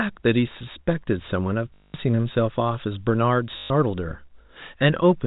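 At 1.74 to 1.94 s and again at 3.58 to 3.70 s, you get packet loss with the last packet repeated: the speech turns into a robotic 50 Hz buzz, which fits 20 ms packets being replayed across the gap, all over band-limited G.711 telephone audio.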